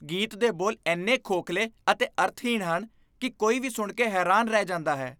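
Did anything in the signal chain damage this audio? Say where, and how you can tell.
No: nothing in the capture, conversion, transmission or playback stages has audibly damaged this speech recording.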